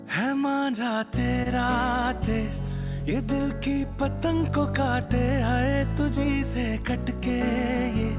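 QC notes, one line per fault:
Throughout: clock drift between sender and receiver. The sender's clock runs about one and a half percent slow, so the buffer keeps draining and small hiccups recur unevenly.
1.43–1.48 s: short stall from a late packet. The buffer ran dry and the last sound was held about 24 ms until the packet arrived. Nothing was skipped.
3.41–7.76 s: repeated timing corrections. Short pieces get repeated to keep pace with the slow sender, adding around 70 ms in total, at about 98% speed.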